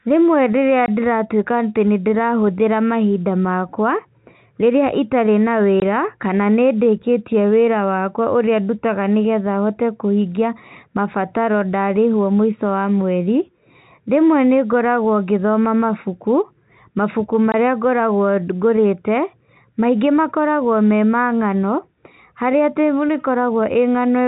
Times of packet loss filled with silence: 0.86-0.88, 5.80-5.82, 17.52

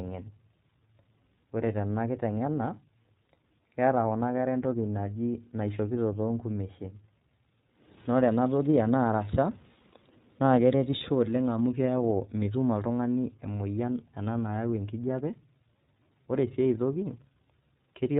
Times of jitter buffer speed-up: none

